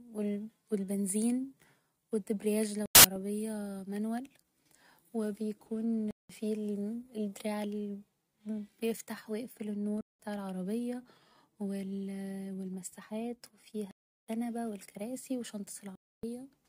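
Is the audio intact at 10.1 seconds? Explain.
No. From 10.01 to 10.19 s the speech drops into a corrupt frame muted gap, a hard silence of about 0.18 s that fits roughly three compressed frames. Damaged bits made the decoder reject those frames, and the player substituted silence for them. Unlike a buffer underrun, the timeline isn't stretched: the speech resumes exactly on schedule. Unlike loss concealment, nothing is smeared or repeated to fill the gap, so the hole starts and ends abruptly.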